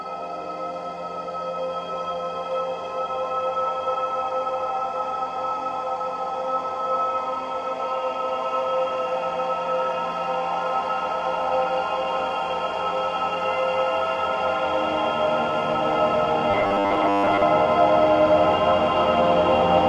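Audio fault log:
16.51–17.43 s, robotic sound from repeated short buffers: a rigid 100 Hz buzz, likely a 10 ms chunk looped over most of it. The spectrogram shows even horizontal stripes every 100 Hz.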